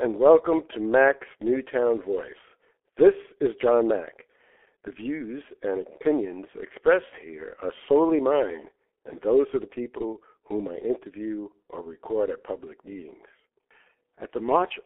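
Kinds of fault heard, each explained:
G.723.1 codec: A low-rate telephony coder working in 30 ms frames, its hoarse texture fitting roughly 6.3 kbit/s. Only a 300 Hz to 3.4 kHz band survives, so the speech sounds muffled, and the slowly updated voice model heavily blurs consonants throughout.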